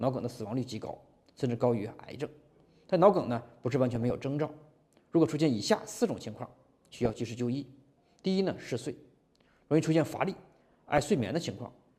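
Weak DAB reception lets bit errors slip past error correction into the MP2 data, corrupting samples and scale factors at a bit error rate of around half a percent. This causes DAB burbling, with short blips of noise in single sub-bands at 3.93 to 4.11 s, 6.34 to 7.19 s and 10.30 to 11.23 s.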